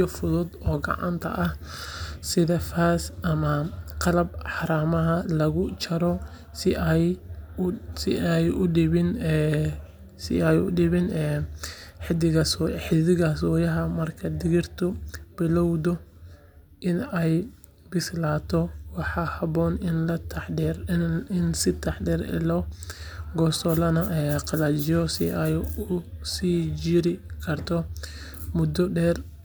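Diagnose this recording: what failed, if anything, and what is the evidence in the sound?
Nothing failed that I can hear, so there's no stage of the chain to point a finger at and no evidence to lay out for this speech recording.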